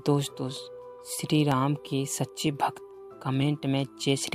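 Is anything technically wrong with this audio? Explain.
Yes. From 0.57 to 3.42 s there are clock drift buffer slips. Two devices likely run on clocks that disagree by a few hundred parts per million. The buffer between them drifts until about 15 samples are dropped or repeated. This is heard as about four regular clicks, one every 0.95 s.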